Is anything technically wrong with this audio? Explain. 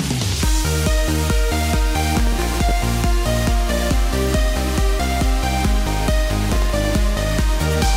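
Yes. From 6.49 to 6.72 s a gritty burst of crackle tears through the sound. This is processor overload crackle: the processor misses a run of deadlines, dropping around twenty very short buffers of roughly 1.5 ms each to silence, leaving hard-edged gaps.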